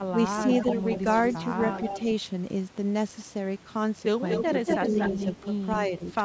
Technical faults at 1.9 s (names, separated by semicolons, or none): echo leak